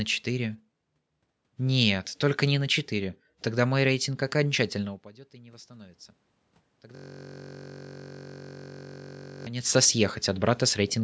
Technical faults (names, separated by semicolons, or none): system hang loop